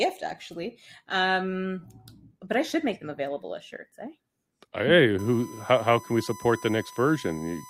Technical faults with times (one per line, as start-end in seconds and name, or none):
5.19-7.69 USB whine